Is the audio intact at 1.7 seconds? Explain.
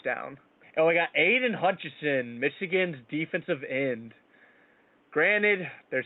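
Yes, the audio is intact at 1.7 seconds, with the speech carrying on cleanly over room noise sitting about 37 dB below it.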